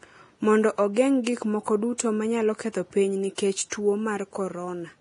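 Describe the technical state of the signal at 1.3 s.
Just before 1.3 s, from 1.24 to 1.27 s, pre-echo leaves a 28 ms smear of hiss ahead of a sharp speech onset. The codec spread a block's quantisation noise backward into the quiet gap, so unlike reverb or a click, the noise comes before the attack rather than after it. Throughout the clip, including this moment, heavy damage from what is likely Vorbis compression, fitting roughly 30 kbps, leaves nothing above 10.6 kHz and coarsely quantised treble. The top of the band sounds grainy and hissy rather than simply dull, as it would with a plain low-pass filter.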